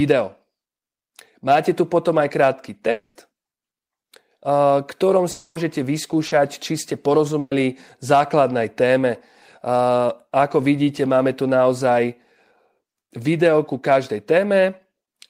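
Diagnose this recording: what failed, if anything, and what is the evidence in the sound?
Network-side trouble. At 2.91–3.18 s and 5.31–5.58 s the sound smears into a fading buzz or hiss for about 240 ms, then jumps ahead; likely a long network dropout.

A short concealed packet loss at 6.27–6.34 s: roughly 40 ms never arrived, and the receiver patched it by extending the previous sound, leaving a brief wobble.

At 7.39–7.54 s there's a burst of packet loss. About 120 ms went missing, filled by the previous sound fading out before the audio resumes further on.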